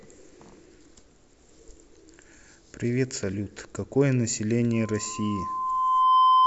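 A microphone is picking up the loudspeaker it feeds, and at 1 kHz the loop gain passes one, causing loudspeaker feedback squeal. From 4.73 s a pure tone swells over about a second and a half, ending roughly 10 dB above the speech and lasting to the end.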